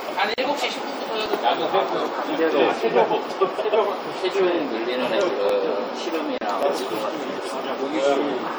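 Throughout, the sound is watery and swirly, with a dulled top end, smeared attacks and metallic chirps on bright content. This is likely MP3 compression at a low rate, plainly audible damage that fits about 64 kbps. The encoder cuts the treble and lets weak frequency lines flicker on and off between frames.

At 0.34 to 0.38 s (40 ms) and 6.38 to 6.41 s (33 ms), a gap at a join of encoded pieces opens in the continuous sound, its edges smeared by the codec. Separately encoded sections were butted together, keeping each one's start delay and end padding. The sound then resumes exactly where it stopped, which sets this apart from lost audio.

At 1.26, 5.49, 6.63 and 7.62 s, single sharp clicks are heard, each likely from dropped samples. Under a millisecond of waveform goes missing, so the signal jumps to a later value. Nothing audible is removed, unlike the gaps: there is a click, not a hole.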